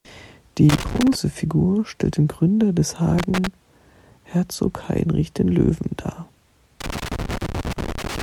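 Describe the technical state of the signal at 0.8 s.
At 0.8 s you're right in the middle of a loose connector crackle running from about 0.69 to 1.15 s. A worn or dirty contact is making and breaking as it shifts, chopping the speech up, so you hear a ragged, scratchy burst.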